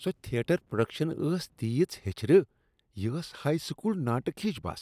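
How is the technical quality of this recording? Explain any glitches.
The technical quality of this recording is sound, with no glitches to explain.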